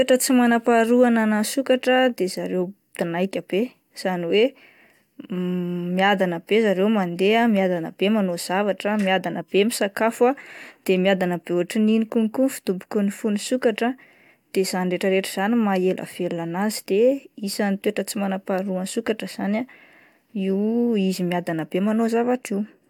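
No technical faults detected.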